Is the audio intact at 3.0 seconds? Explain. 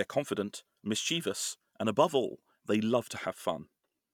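Yes, the speech at 3.0 seconds is intact, with no dropout, click, distortion or other fault at that moment.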